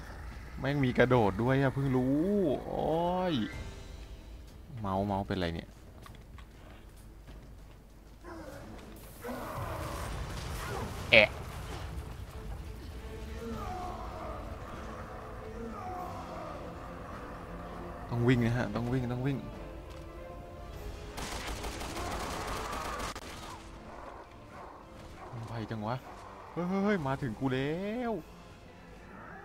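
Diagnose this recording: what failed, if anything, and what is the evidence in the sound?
At 23.18 s the whole signal, background noise included, drops by about 7 dB in a single step and stays there to the end. This sudden gain jump likely comes from a digital gain setting in the processing chain applied instantly, with no ramp.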